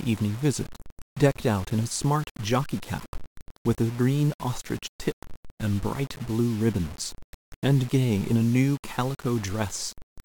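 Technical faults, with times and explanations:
Throughout, low bit depth without dither: grainy distortion follows the speech, quiet parts turn gritty or sputter. Likely rounded to 6 bits, error about 20 dB below signal.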